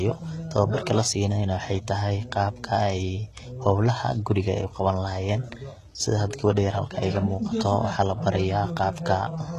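From start to finish the speech carries plainly audible codec damage, likely HE-AAC compression: s sounds turn gritty and lispy, and nothing survives above 12.3 kHz. Unlike a plain low-pass, the upper band stays bright, but it is treble copied up from lower bands, consistent with a low bitrate around 16 kbps.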